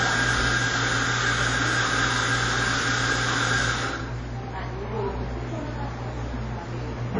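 All the way through, the sound has a washy, ringing smear, and the hiss swells and fades along with the signal. Nothing gets above 10 kHz. That's likely WMA compression, and the damage is plainly audible, which fits a low bitrate around 32 kbps.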